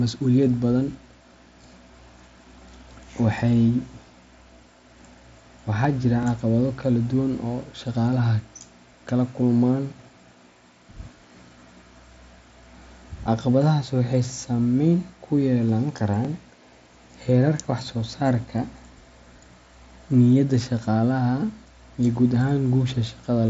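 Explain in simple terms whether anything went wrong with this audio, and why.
Two things went wrong. At 5.84 s, just before "jira caqabado kala duwan", there is concealed Bluetooth headset packet loss. One tiny piece of sound went missing. The phone filled the gap by copying recent sound, so it is barely noticeable.

There are also overlapping chunks at 6.23 s, before "caqabado kala duwan", and again at 16.25 s, after "ku yeelan". Each time, a 20 ms sliver plays twice. You hear it as a small click or stutter. The ten-second spacing points to audio handled in 10-second pieces that overlap slightly.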